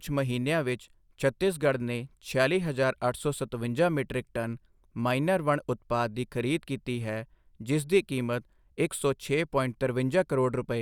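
Speech recording, no technical faults detected.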